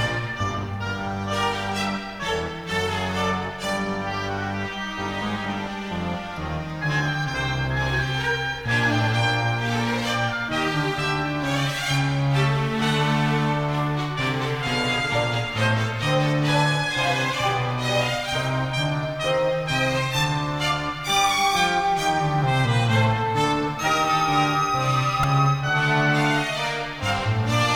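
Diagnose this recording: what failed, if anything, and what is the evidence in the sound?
A brief buzzy click at 25.23 s marks a repeated buffer at the driver or buffer stage. New audio missed its deadline, so one piece of about 1.45 ms, which fits a 64-sample buffer, played four extra times with hard joins, replacing roughly 5 ms of sound.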